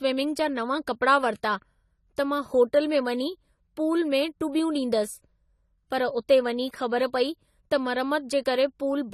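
AAC compression runs through the whole recording, from start to finish. The top end is cut away and the speech sounds dull. Sibilants and sustained sounds have a warbling, fizzy, smeared texture, and the damage is plainly audible. The likely cause is AAC-LC coding at a low bitrate, consistent with around 32 kbps: the encoder lowered its cut-off and quantised the spectrum coarsely, leaving gaps that swirl from frame to frame.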